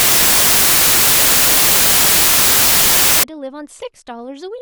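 From 0 to 3.23 s, the samples are built from the wrong bytes. Misassembled bytes push the low bits to the top, so the speech becomes loud white noise.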